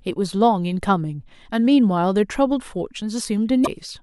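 Near the end of the speech, from about 3.62 to 3.67 s, there is damaged data in the compressed stream. For roughly 54 ms the encoded bytes are corrupt, so the decoder misreads or discards the affected frames, loses its place in the bitstream and hunts for the next valid frame header before normal decoding resumes. The result is a brief chirp, click or short hole in the speech.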